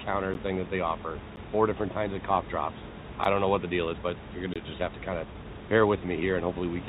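Blocks of digital silence interrupt this speech recording at 0.34 s, 1.36 s and 3.24 s, each lasting 6.5 to 10 ms, and again from 4.54 to 4.56 s for 20 ms. In each case the output buffer was likely left unfilled, so the signal drops straight to silence and returns with no fade. That hard edge produces a click or tick, and the longest gap is a brief hole in the audio. A jitter buffer speed-up follows from 4.78 to 6.63 s. There the receiver had built up more audio than its target and shed roughly 400 ms by repeatedly cutting out short pitch-period segments. The speech plays at about 119% of normal speed with its pitch unchanged, so that stretch sounds hurried. All of this passes through a G.711 A-law call path that leaves nothing above 4 kHz, over room noise about 13 dB below the speech.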